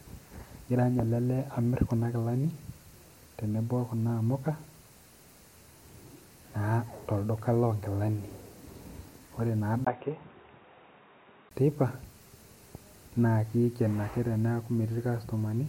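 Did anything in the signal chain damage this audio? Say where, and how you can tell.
Yes. From 9.85 s to 11.51 s the speech turns dull and boxy, with nothing above 3.8 kHz, a level drop of about 5 dB, and a new noise floor about 45 dB below the signal. A 20 ms silence marks the switch. This is likely the input switched to a poorer device at the driver or device stage, with the system moving to another microphone or a headset call profile whose narrower band, tone and noise replace the original path until it switches back.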